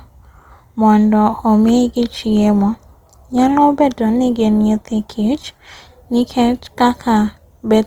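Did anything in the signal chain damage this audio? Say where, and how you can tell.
Yes. From 1.62 s to the end, the network forced the adaptive stream to a lower bitrate. The speech abruptly shows more codec artefacts, with no gap.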